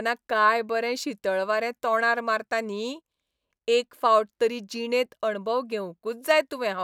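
No technical faults can be heard anywhere in this speech recording, so the signal stays intact and steady throughout.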